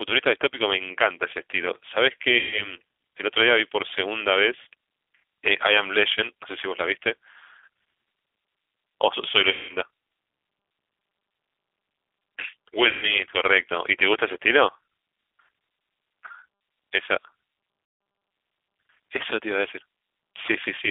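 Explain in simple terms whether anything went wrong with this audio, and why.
The whole recording passed through the G.729 codec, a low-rate phone codec that rebuilds speech from a simple model of the voice. It keeps only the narrow telephone band, so the speech sounds muffled, slightly rough and synthetic throughout.

There are four gaps where VoIP packet loss was concealed by the speech codec: at 2.39 to 2.75 s, 9.51 to 9.76 s, 12.89 to 13.19 s and 17.85 to 18.01 s, covering 120, 180, 140 and 160 ms of lost audio. In each gap the decoder stretches the last sound into a fading buzz or coloured noise, and the voice stays weak briefly afterward.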